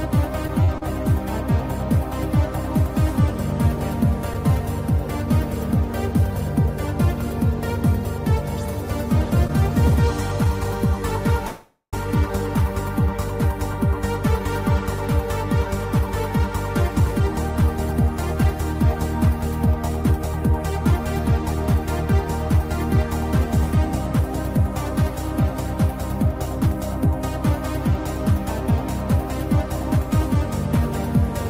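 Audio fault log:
0.64–0.69, 0.78–0.83 and 9.47–9.50 s, short stall from a late packet: each time the sound hangs on a moment too long, with a brief buzz or dip. The receiver ran its jitter buffer dry and stretched the last sound, by 44, 35 and 18 ms, then resumed without losing anything.
11.47–11.94 s, call audio freeze: the sound stops moving and the last sound carries on as a fading buzz or hiss, ending in about 90 ms of silence before the audio picks up where it left off. This inserts a gap of 457 ms with nothing missing, likely because packets were held up in transit.
15.99–31.16 s, jitter buffer speed-up: the audio runs at 103% speed with its pitch unchanged. The receiver repeatedly cut out short pieces of one or a few pitch periods, around 0.4 s in total, to shrink a backlog in the jitter buffer.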